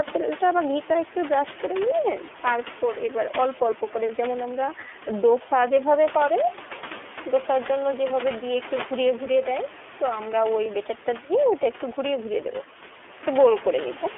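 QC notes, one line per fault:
throughout, iLBC codec: plainly audible rough, synthetic speech, each 30 ms frame's excitation coded independently, which fits the 13.33 kbps mode. A spectrogram shows energy held to 250 Hz to 3.4 kHz, with a hard ceiling; room noise sits about 12 dB below.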